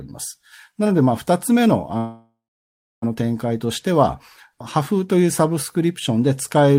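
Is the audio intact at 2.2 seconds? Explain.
No. From 1.97 to 3.04 s the sound stretches into a fading buzz or hiss, then silence, before resuming intact: a call audio freeze, likely from delayed packets emptying the jitter buffer.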